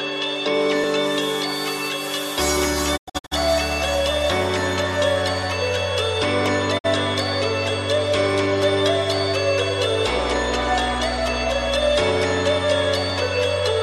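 Dropped samples at 0.84 s give a single sharp click, likely from well under a millisecond of audio going missing so the waveform jumps straight to a later value.

Digital broadcast dropout runs from 2.96 to 3.33 s. The receiver mutes in several short holes totalling 240 ms, the longest 96 ms, each fading out over about 20 ms while reception fails.

Dropped samples recur at 5.43 and 6.46 s, each a brief click where the waveform jumps.

Digital broadcast dropout returns from 6.77 to 6.86 s as a single 48 ms muted gap that fades out over about 20 ms.

Dropped samples click again at 11.28 and 13.10 s, each likely a tiny gap heard as one sharp tick.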